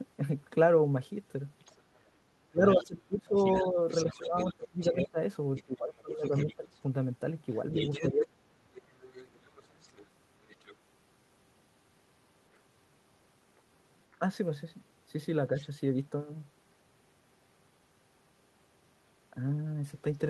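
Other side's voice leaking through, 1.6 to 10.75 s: a second voice sits under the speech, about 15 dB down. It is likely loudspeaker echo that the echo canceller failed to remove from the microphone signal. Within that stretch comes speech suppressed in double talk, 2.4 to 6.66 s: with both sides talking, the canceller likely mistook the talker for echo and pulled everything down. Pieces adding up to roughly two seconds dip by as much as about 20 dB. The same suppression returns at 8.1 to 8.71 s, cutting about half a second of speech by up to about 35 dB, close to a dropout. The leaking voice comes back faintly at 13.58 to 14.16 s, about 35 dB below the speech and likely echo residue again, and at 15.6 s there is a brief scrap about 25 dB down.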